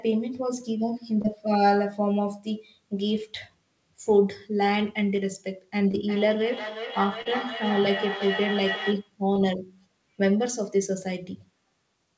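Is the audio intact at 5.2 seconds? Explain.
No. Between about 5.16 and 5.19 s there is a short concealed packet loss. Roughly 20 ms of the call audio arrived too late for the decoder, and the receiver covered about 15 ms of that gap by extending the preceding sound, following its pitch where voiced or substituting shaped noise where not, before crossfading back into the received signal. The result is a brief smear or wobble in the speech, heard through the call's G.722 band limit of 8 kHz.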